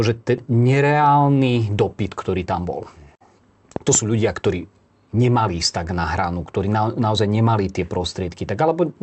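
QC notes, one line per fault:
0.37–0.39 s, skip ahead: playback jumps straight over roughly 0.4 s of speech with no gap, so the two sides butt together abruptly.
2.37–2.93 s, jitter buffer speed-up: speech runs about 9% fast at unchanged pitch, as short pitch-period slices totalling around 70 ms get trimmed out, sounding hurried.
3.76–3.97 s, loud pop: two sharp pops land on top of the speech, peaking roughly 10 dB above it, likely from a plug, switch or static discharge.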